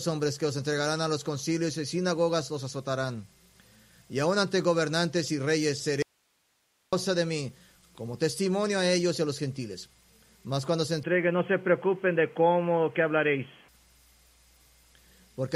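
The signal path likely lost its source for about 0.9 s while the chain after the break stayed live, an audio dropout to a faint residue: from 6.02 s to 6.93 s the sound cuts out abruptly, leaving only hiss roughly 45 dB down, then snaps straight back.

At 11.03 s the recording likely switched its input to a poorer device, holding there until 13.68 s. Everything above 3.3 kHz vanishes, so the sound turns dull and boxy with no gap at the change, a new noise floor sits around 35 dB below, and the loudness stays about the same.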